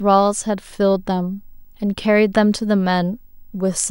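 A speech recording carrying video or display buzz for its whole length: a 50 Hz buzz with hash above it and a faint 15.6 kHz whine, about 40 dB below the speech. A nearby screen or video cable is coupling its field and line scanning into the audio path.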